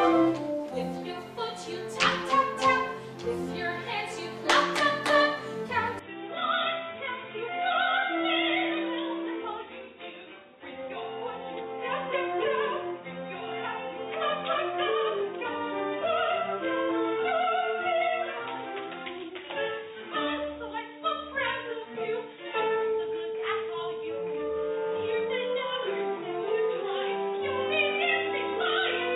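At 5.99 s the sound turns dull and boxy, with nothing above 3.8 kHz, drops about 10 dB, and gains faint background noise, likely an input switched to a poorer device.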